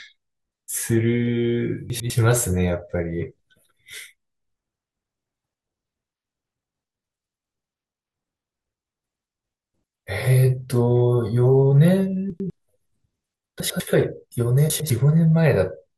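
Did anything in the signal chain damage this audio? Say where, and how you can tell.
Yes. Chunks out of order: the speech jumbles briefly at 1.9–2.1 s, 12.3–12.5 s, 13.6–13.8 s and 14.7–14.9 s. Each spot sounds garbled. Two 100 ms blocks trade places, so one arrives a block late. Nothing goes missing. The order breaks, leaving three hard joins. This points to a buffer or network stage delivering blocks late and writing them out in the wrong sequence.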